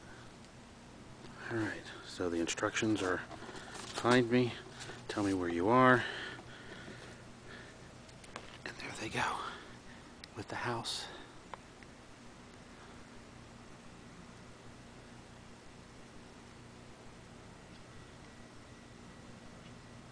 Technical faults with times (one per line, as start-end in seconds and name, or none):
none